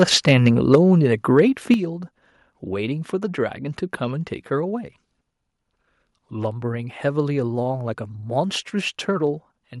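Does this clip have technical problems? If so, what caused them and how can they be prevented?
Yes. From 0.01 to 0.75 s the loudest syllables carry a harsh, crackling edge, with the peaks sounding flattened and gritty. This is microphone overload, likely caused by the input volume being set so high that the waveform ran about 5 dB past the converter's ceiling, shearing off the tops of the peaks so that roughly 1.5% of samples were clipped. Keeping the input gain lower, so that the loudest speech peaks stay several decibels below full scale, prevents it.

The level of both voice and background then drops abruptly in single steps at 0.75 s, 1.74 s and 9.27 s, by about 4 dB, about 7 dB and about 2 dB. The first step follows straight after the distorted opening. This is the microphone volume being stepped down, likely by call software finding the microphone too loud or clipping and cutting the device's input volume in one move each time. 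Setting a sensible input level beforehand and disabling automatic microphone gain adjustment prevents these jumps.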